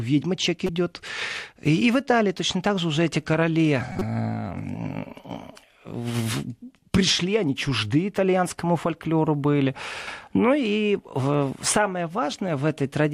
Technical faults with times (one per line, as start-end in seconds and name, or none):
0.66-0.69 corrupt frame decoded
3.92-4.02 corrupt frame decoded